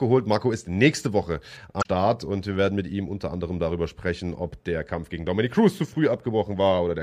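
Damaged data in a compressed stream at 1.79 to 1.86 s: corrupted bytes make the decoder misread frames and resynchronise, producing a brief glitch.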